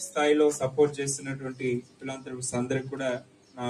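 Throughout the clip a noise suppressor designed for speech is at work on material that isn't speech, and it keeps mistaking sustained, steady parts of the sound for background noise. The result is a restless level, with held portions and decays dipped by up to around 10 dB while sharper onsets pass mostly intact. Unlike compressor pumping, the movement follows how steady the sound is rather than how loud it is.

The sound is cut by the noise suppressor most clearly between 1.82 and 2.28 s, and again between 3.2 and 3.58 s. Each time the sound sinks by about 10 dB for roughly a third of a second or a little more. It thins and fades instead of cutting out, which separates this from a dropout or a hard gate closing. Tails shorten unnaturally rather than vanishing with a click or gap.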